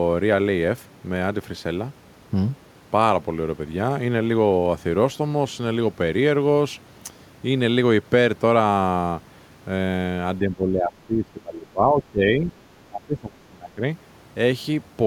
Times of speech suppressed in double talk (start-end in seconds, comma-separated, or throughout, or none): 10.39-12.55, 12.81-13.82